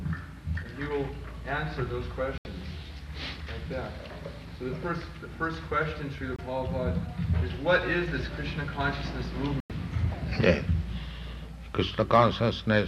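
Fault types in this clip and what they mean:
Digital broadcast dropout: the sound cuts to silence three times, at 2.38 to 2.46 s, 6.36 to 6.39 s and 9.60 to 9.70 s, then resumes further on. The receiver muted on lost or corrupted frames, with gaps fitting 24 ms frames, and the missing material is gone.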